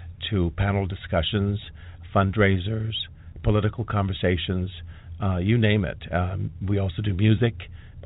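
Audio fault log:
Nothing to log here, as the speech just comes through the G.711 telephone path the way that format should, topping out around 4 kHz with only the faintest coding noise riding along under it.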